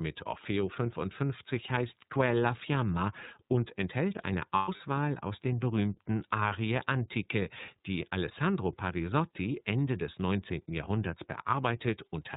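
Speech clip, and the whole thing has gone through the iLBC codec. Nothing above 4 kHz survives, and the voice has that slightly rough, synthetic edge, fairly obvious here. The character points to the 30 ms frame mode at around 13.3 kbps. Then there are lost iLBC frames from 4.55 to 4.81 s, between "und enthält eine" and "aus den berühmten". About 150 ms of audio goes missing, spread over roughly 240 ms, which fits five dropped 30 ms frames. The longest gap runs around a tenth of a second. The decoder fills each hole by repeating the last pitch cycle with some noise mixed in, so you hear a brief buzzy, held vowel. Because each frame decodes on its own, the sound snaps back right away.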